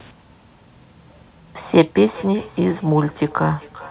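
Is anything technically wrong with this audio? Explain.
Yes. From 1.76 s to the end, the speech comes back as a thin, ringing repeat roughly every 0.4 s, about 21 dB below the original. This is feedback echo between two devices: one device plays the other's microphone signal, and that microphone picks it up again, which neither device's echo canceller removes.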